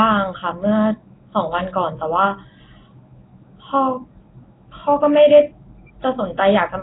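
Throughout the speech, a rough, hissy halo and a smeared, underwater quality point to Nellymoser compression, likely from the Asao codec at a rate fitting 16 kbps, which starves weak bands and fills them with noise. A spectrogram shows blotchy, noise-filled bands and nothing above 3.8 kHz.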